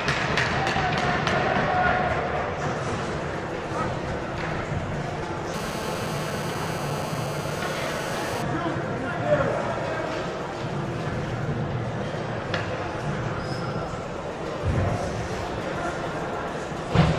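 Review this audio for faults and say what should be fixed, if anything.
GSM phone buzz from 5.54 to 8.42 s: a steady, raspy 217 Hz buzz with strong harmonics, about 10 dB below the signal. A nearby 2G phone on a call transmits bursts at that rate, which the audio circuit rectifies. Keep phones away from the equipment or in flight mode.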